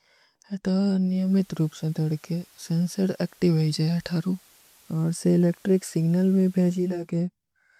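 At 0.95 s the digital radio blends to analogue FM, cross-fading over about half a second. Hiss rises, sitting roughly 30 dB below the speech. The level stays the same. The receiver fades back to digital at 7.18 s.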